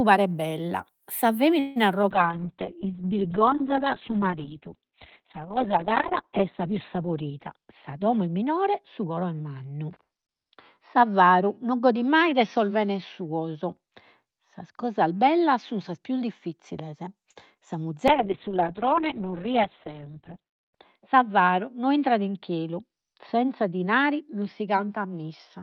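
Just after "paret bella sa", at 1.59 s, packets were likely held up in transit and the jitter buffer ran dry. This is a call audio freeze. The receiver carried the last sound forward as a fading buzz for about 0.18 s. When the packets arrived, the speech resumed exactly where it had stopped. Nothing is lost, but a pause has been inserted, and the delay grows by roughly 160 ms.

At 2.02 s comes a short concealed packet loss. About 20 ms of audio never reached the decoder in time. The receiver bridged the hole by extending the preceding sound and then crossfading back into the real signal, leaving a brief smear of about 30 ms. A second loss of the same kind at 17.54 s takes out another 20 ms and leaves a similar small wobble.

From 2.12 s to the end there is a call bitrate drop. The bandwidth estimate collapsed and the encoder fell from 48 kbps to 6 kbps, sitting at its lowest for about 4 s. 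Audio bandwidth shrank from 20 kHz to 4 kHz, so the speech turns muffled and watery, with coarse, gritty coding.

Between 7.53 and 9.24 s there is a jitter buffer speed-up. The buffer had built up more audio than its target, so the receiver trimmed repeated pitch-period fragments, removing roughly 150 ms. The speech plays at 110% speed with unchanged pitch and sounds hurried.

At 17.31 s a short stall from a late packet occurs. A packet was missing when due, so the last sound was stretched for about 49 ms until it came. The result is a held, slightly buzzy syllable, with nothing skipped.

At 18.09 s a second call bitrate drop pulls the rate from 48 kbps back down to 6 kbps, its lowest for about 2.7 s, and narrows the band from 8 kHz to 4 kHz. The dull, rough quality returns and lasts to the end.

From 20.50 to 21.30 s a further jitter buffer speed-up runs the speech at 106%, trimming around 50 ms. 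It is a milder rush than the earlier one.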